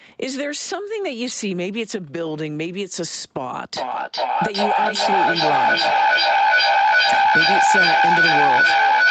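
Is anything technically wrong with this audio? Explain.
Yes. From 3.75 s to the end there's feedback echo between two devices: another device replays this mic's sound, which gets picked up again. Repeats come back roughly every 400 ms, building to about 9 dB above the speech.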